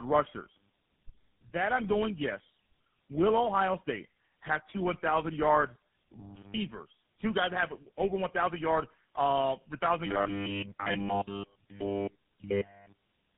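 Tandem speech coding runs throughout. The speech was decoded and re-encoded at each network border, which points to a chain of three low-rate codecs (an AMR-style coder, then GSM full rate twice) with each coder working on the previous one's damage. The result is rough, muffled and warbly, with nothing above 3.8 kHz.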